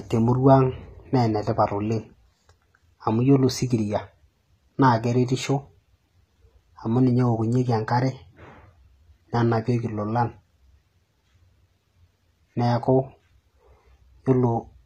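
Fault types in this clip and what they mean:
HE-AAC compression: the speech keeps treble up to about 14.9 kHz, but above the codec's crossover the top band is likely rebuilt by copying lower bands upward under a coarse envelope, so s sounds come out gritty and lispy. The codec damage is plainly audible, fitting a low rate near 20 kbps. On a spectrogram the upper band shows repeated, smeared copies of lower harmonics that don't line up across the crossover, with nothing above 14.9 kHz.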